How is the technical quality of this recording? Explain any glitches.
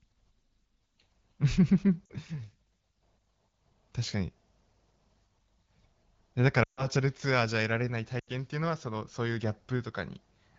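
The recording has three short dropouts from lost AMR speech frames, heard over the light, clear coding of AMR wideband (HD Voice), which sounds like a mid-to-high rate around 12.65 kbit/s.

The lost AMR speech frames come at 2.06 to 2.12 s, 6.63 to 6.90 s and 8.20 to 8.30 s. Radio errors corrupted the frames, so the decoder filled the gaps by repeating the last good pitch and vocal tract shape at falling gain. The first, about 40 ms, fades to near silence over its two frames. The third, about 80 ms, also drops to near silence within two frames. The middle one, about 140 ms, drops to near silence within two frames, about seven 20 ms frames' worth, and the voice comes back thin for a moment.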